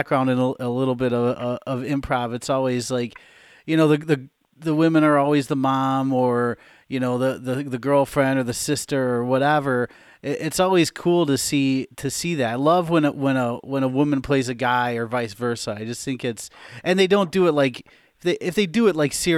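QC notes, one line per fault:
No faults were found in this speech recording. Nothing heard calls for a line of its own.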